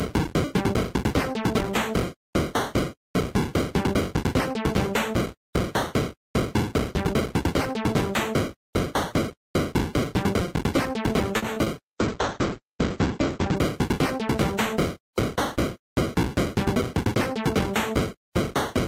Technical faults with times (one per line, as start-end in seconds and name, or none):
11.37-11.44 short stall from a late packet
11.54-11.68 short concealed packet loss
11.84-13.62 call bitrate drop